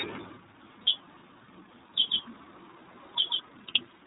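Throughout, the speech carries the iLBC codec's signature: nothing above 4 kHz, so a spectrogram shows a hard ceiling, plus a plainly audible rough, slightly synthetic texture. Each 30 ms block is coded on its own, which fits iLBC's 30 ms mode.

At 0.84 s, lost iLBC frames leave a 30 ms gap. The decoder filled it by repeating the last pitch cycle with added noise, which sounds like a brief buzzy held vowel. The waveform shows short, regular repeated periods, with normal speech resuming immediately after.

From 2.08 to 3.40 s, a doubled audio track appears. A second, full-band copy of the speech trails by roughly 150 ms at around 5 dB quieter, with no reverb tail. It is likely a slower second capture path or misaligned edit. On a spectrogram, every feature appears twice, offset horizontally, and the copy starts and stops abruptly.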